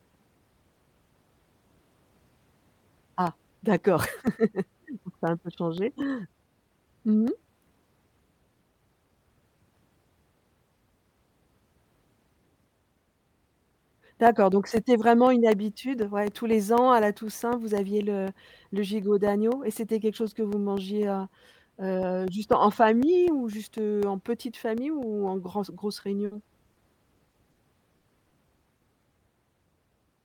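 At 26.25 to 26.33 s, a burst of packet loss left about 60 ms of the call undelivered. The receiver stretched the last sound and faded it, so the speech turns into a brief held buzz or hiss and then jumps ahead past the missing stretch.

Short concealed packet loss follows at 26.73, 27.31, 27.51, 27.97, 28.29 and 28.77 s. Each time, 20 to 40 ms arrived too late, and the decoder patched the gap from the preceding sound, leaving quick smears or wobbles where short sounds can drop out.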